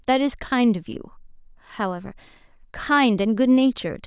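No technical faults can be heard anywhere in the recording.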